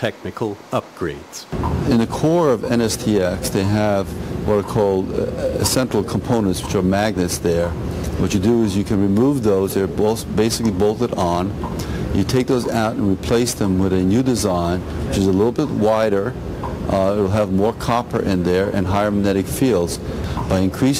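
Sample clock jitter runs throughout: the converter's clock wanders by roughly 2 microseconds, so samples land slightly off time, with errors largest on steep waveform slopes. The result is a hiss or roughness about 35 dB below the signal, rising with loud, bright passages and vanishing in silence.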